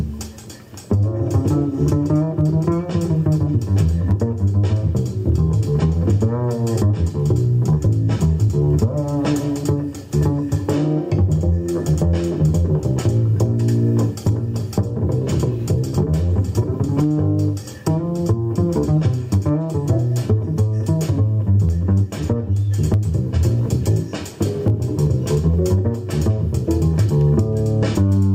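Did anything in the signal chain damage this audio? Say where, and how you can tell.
Yes. The input gain is likely set far too high, with a fast limiter or compressor at the capture or call-processing stage pulling the level down on every loud event. The result is gain pumping that runs through the whole clip, with a swing of roughly 15 dB. Loud and quiet passages are forced close together, leaving the audio squashed.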